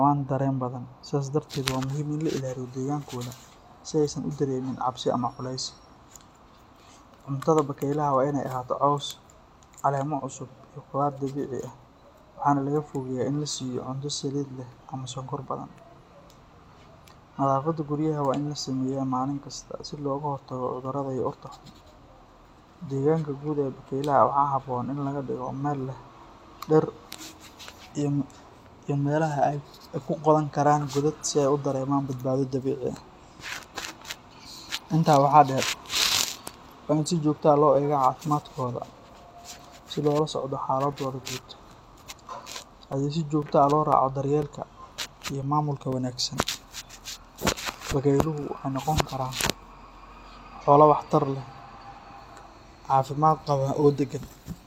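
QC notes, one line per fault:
40.92–48.43 s, periodic USB or driver dropouts: every 0.5 s, about fifteen times, a few milliseconds of the speech are blanked to silence as a background task stalls the driver, leaving evenly spaced ticks heard only while signal is present.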